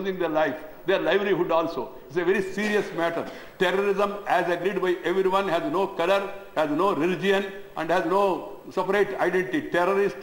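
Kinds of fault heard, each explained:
Crude rate conversion: from about 2.35 s to the end, the audio carries a gritty, inharmonic fizz that tracks the louder and brighter passages. Samples are repeated rather than filtered between rates, which fits a 44.1 kHz to 48 kHz step, and the repeats fall in a fixed cycle that throws up unrelated tones roughly 30 dB under the signal. Unlike plain dither or hiss, the grit vanishes when the sound goes quiet.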